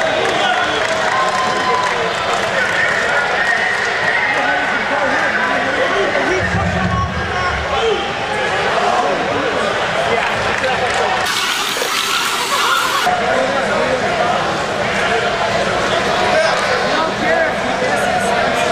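A playback or editing stage has likely run one stretch of this audio against the wrong clock, producing a section at the wrong speed from 11.26 to 13.06 s. Across that span the material moves at twice its recorded rate, so everything is hurried and compressed in time, and because pitch rises with speed, the sound jumps up by about ten semitones before snapping back to its normal rate and register at 13.06 s.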